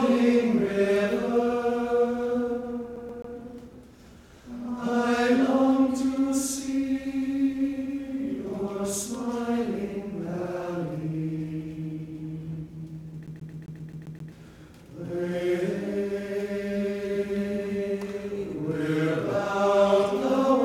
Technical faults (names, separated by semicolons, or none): CD stuck on one turn